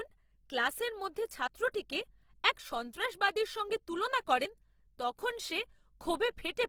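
From the start, the speech sounds grainy and rough, with a noisy texture on tonal parts though the bandwidth stays full up to about 20.4 kHz. This is likely Opus compression in its music mode at a low rate, consistent with roughly 16 kbps, filling starved bands with folded or noisy content.

At 1.47 s, just after "ক্লাসের মধ্যে", there is a brief skip where the sound jumps forward with no silence. This is audio missing between chunks: a piece of around 20 ms was likely dropped at a chunk boundary, and the two sides were butted together.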